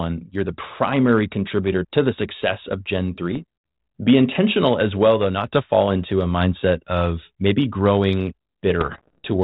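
Bit errors on the ADPCM link of this speech clip, around 0.7 and 1 percent of bits, corrupt the decoder's step size and predictor, so rough popping bursts with brief level jumps hit at 3.31 to 3.42 s and, after "mindset of maybe growing", 8.80 to 9.26 s. The G.726 coding at 32 kbit/s carries light damage.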